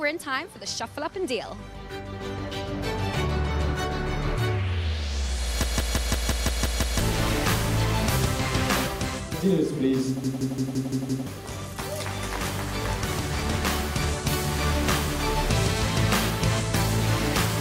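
At 5.63 s and again at 10.24 s the system hang loop kicks in: the system stalls while the hardware keeps replaying one 0.17 s chunk, which fits an 8192-sample buffer. You get a machine-gun stutter at about 5.9 Hz, eight repeats then six, swallowing roughly 1.5 s and 1 s of audio.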